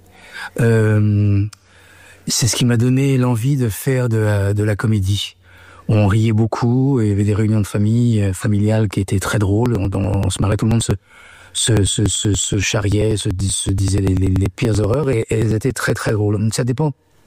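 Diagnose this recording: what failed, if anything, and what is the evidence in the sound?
The driver or USB transport stage failed: periodic USB or driver dropouts. From 9.66 s to 16.09 s something stalled the audio path every 0.096 s, about ten times a second. Each stall dropped a few milliseconds of samples outright rather than padding with silence, so the waveform jumps across the gap. That discontinuity is heard as a steady train of ticks riding on the sound, dozens of them at an even rate until the stalls end at 16.09 s.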